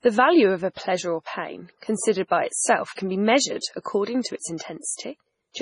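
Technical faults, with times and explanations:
Throughout, MP3 compression: the likely cause is an encoder starved of bits, at a rate consistent with about 24 kbps, so it discards everything above 10.6 kHz and zeroes the weaker frequency lines it judges inaudible. Those lines drop in and out from frame to frame, so the speech takes on a heavy watery, swirling texture, sibilants turn metallic and chirpy, consonant attacks smear, and the top end sounds dull.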